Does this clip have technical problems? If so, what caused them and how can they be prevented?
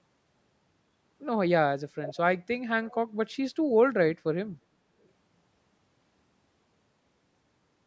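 Yes. Faint echo leak appears at 2.03–2.17 s, 2.86–2.95 s and 5.03–5.08 s: delayed copies of the speech arriving 379 ms late, fading from about 15 dB to about 40 dB below it. This is likely a far-end loudspeaker whose echo canceller let residue through. On a spectrogram, weak harmonic traces repeat the speech pattern offset by about 0.38 s. Headsets or better-tuned echo cancellation on the loudspeaker side would prevent it.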